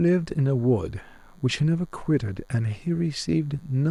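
A speech recording carries DECT cordless phone buzz throughout, a faint, thin, steady buzz at 100 Hz, well below the speech. A nearby DECT handset or base sends bursts every 10 ms that the audio circuit rectifies. Its dense, raspy harmonics set it apart from smoother 50 or 60 Hz mains hum.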